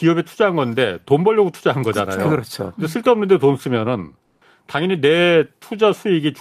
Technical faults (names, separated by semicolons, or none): comfort noise in place of the background